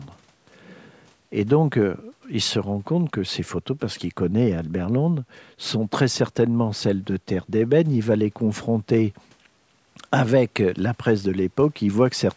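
Nothing here is a fault: the speech simply bears the marks of ordinary call microphone processing, with the lowest bass trimmed away and nothing above 8 kHz, exactly as that path is meant to sound.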